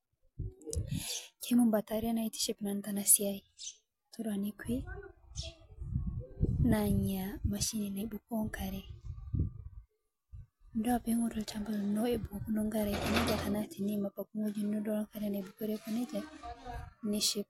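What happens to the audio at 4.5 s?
Nothing goes wrong at 4.5 s; the speech carries on intact through that moment, with no dropout, click or distortion to be heard.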